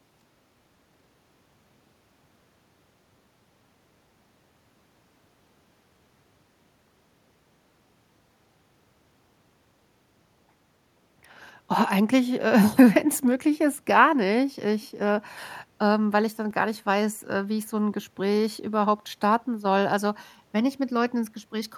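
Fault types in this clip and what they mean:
Background gated by the echo canceller: the echo canceller pulled the microphone down while the far-end loudspeaker was active, so the room sound sags by about 6 dB for roughly a fifth of a second from 0.58 s. A spectrogram shows a brief vertical band where the background floor thins, then recovers.
DC step: the waveform's zero line jumps at 16.51 s and stays offset to the end of the clip, giving a single low thump while the speech carries on unchanged. The waveform visibly shifts off centre, and a spectrogram shows a short low-frequency burst at the step.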